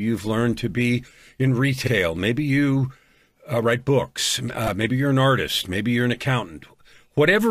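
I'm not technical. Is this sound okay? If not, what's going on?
No, there are two brief stutters from repeated frames: a short chunk of the speech gets played again, once just after "learned to be in" at 1.86 s, and again in a tiny rapid stutter at 4.67 s between "you uh write books" and "maybe you're an artist".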